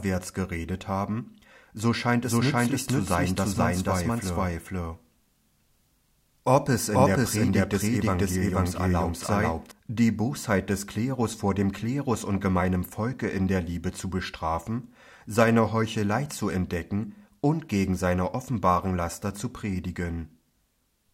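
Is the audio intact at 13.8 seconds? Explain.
Yes, at 13.8 seconds the audio is intact, with no dropout, click, distortion or other fault to be heard at that moment.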